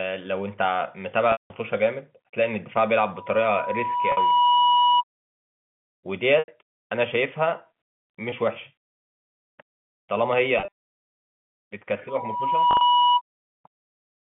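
At 1.32 s the speech drops out for 180 ms in a packet loss with pitch repetition. The receiver loops the last pitch period to fill the gap, so a held, buzzy tone fades to silence and the speech returns with a brief cross-fade. On a spectrogram this appears as a run of frozen, evenly spaced harmonics that fade out. In the waveform it is identical cycles repeating with shrinking amplitude.

From 3.16 to 5.04 s a loudspeaker feedback squeal at 976 Hz swells over about a second and a half to roughly 5 dB above the speech. The microphone is hearing its own loudspeaker, and at that one frequency the loop gain passes unity. On the spectrogram it is a single bright horizontal line that grows in intensity. A 50 ms loss at 4.12 s sits inside it.

Further pitch-repetition losses follow at 6.39 s (90 ms) and 8.30 s (20 ms). The 20 ms gap is only a slight buzzy hold. At 10.58 s there is 110 ms of loss scattered across 160 ms, with no single gap longer than 30 ms.

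From 12.08 to 13.21 s the 976 Hz squeal returns, building faster, in under a second, to the same level. Inside it, at 12.71 s, 70 ms of loss is spread over 100 ms, with the longest gap 40 ms. The gap sizes all fit 10 ms packets. The speech is confined to the telephone band, roughly 150 Hz to 3.5 kHz.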